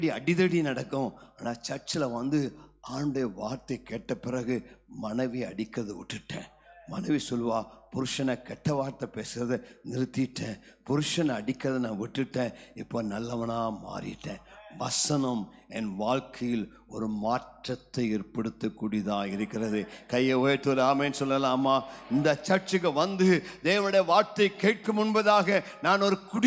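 Nothing in the recording stands out as a technical fault at any point, so there's no glitch to walk through here.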